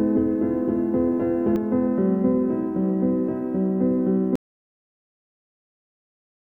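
From the start until 1.56 s the clip carries a doubled audio track: a second, full-band copy trails the first by roughly 0.3 s at about equal loudness, then stops abruptly. Unlike an echo or reverb, it has no decay or room colour, likely from a slower duplicate path. At 4.36 s an audio dropout to silence begins and lasts to the end: the sound cuts off mid-flow into silence with no room tone, unlike a fade or noise gate. The likely cause is lost input while recording continued.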